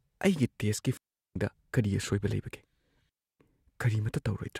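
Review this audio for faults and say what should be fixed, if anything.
Two digital wireless dropouts cut the speech, at 0.97 to 1.36 s and 3.09 to 3.40 s. Each is a clean hole of near silence, about 0.38 s and 0.30 s long. No noise burst surrounds them. The receiver lost too much data and muted quickly. Fix the radio path with line of sight, closer receiver placement and a clear channel.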